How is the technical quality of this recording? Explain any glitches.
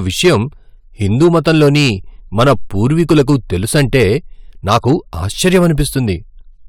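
The recording has repeated hard clipping on its louder speech passages. It occurs from 0.21 to 0.36 s, 1.21 to 1.90 s, 2.39 to 3.36 s, 3.75 to 4.08 s, 4.68 to 4.93 s and 5.45 to 5.98 s, with the level pushed about 5 to 8 dB past what the signal path can carry. The peaks are sliced flat, which shows as squared-off waveform tops. The added upper harmonics appear as bright vertical smearing on a spectrogram. The result sounds like a harsh, buzzy fuzz on those syllables.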